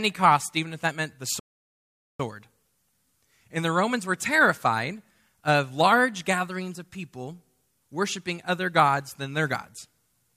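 Speech, interrupted by a rebuffering stall from 1.4 to 2.2 s, right after "if that meant the". The sound drops to silence, then picks up exactly where it stopped. Nothing is skipped. The player ran out of downloaded audio and waited, adding about 0.8 s.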